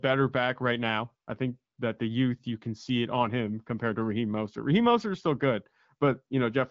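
The speech carries no technical faults, with the band-limited character of AMR wideband (HD Voice) coding at 12.65 kbit/s audible as only light codec colouring and an absence of content above about 7.5 kHz.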